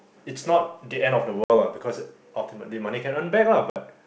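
At 1.44 to 1.50 s and again at 3.70 to 3.77 s, packet loss on an ADPCM call drops about 60 ms of audio, a few packets' worth, leaving hard-edged silent holes. The decoder's predictor and step size lose track of the sender's, so speech resumes with brief distortion before settling. A waveform shows each gap as a flat line with abrupt edges. A spectrogram shows each gap as a clean vertical blank.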